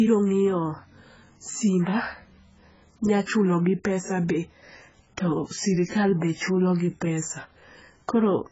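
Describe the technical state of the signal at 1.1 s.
At 1.1 s the speech carries AAC compression damage, and it runs through the whole clip rather than starting or stopping there. Nothing sounds above about 7.7 kHz. The top is dull and sibilants turn fizzy and smeared. The damage is heavy. The likely cause is an AAC-LC encode at a very low rate, fitting roughly 12 kbps. The coder drops the upper band and quantises the remaining spectrum so coarsely that warble appears.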